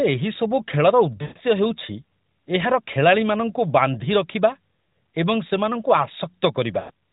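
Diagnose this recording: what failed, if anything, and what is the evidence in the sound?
Speech smears and fades at 1.22–1.38 s and 6.80–6.91 s. These are lost AMR speech frames from radio-network errors, with the decoder extrapolating at falling gain.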